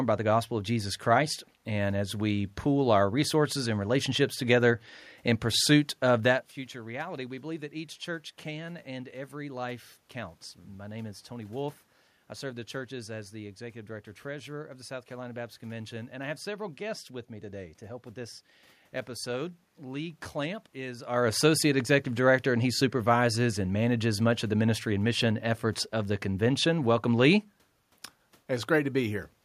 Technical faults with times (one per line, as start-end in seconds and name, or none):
none